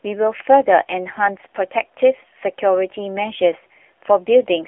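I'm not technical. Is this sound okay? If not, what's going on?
No. Throughout, an AMR narrowband mobile codec, the kind used for phone calls, strips everything above 3.5 kHz and leaves the speech buzzy and synthetic.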